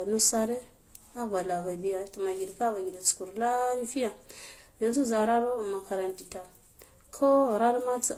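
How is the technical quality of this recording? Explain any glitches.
The speech carries compression damage from start to finish. Throughout the clip, it shows signs of transcoding between lossy codecs, likely ending in Opus. Each encoder re-coded the previous one's artefacts and added its own. The result is a layered mix of different artefacts heard together, which fits an HE-AAC stage near 32 kbit/s followed by Vorbis and Opus. Nothing is heard above 19.7 kHz.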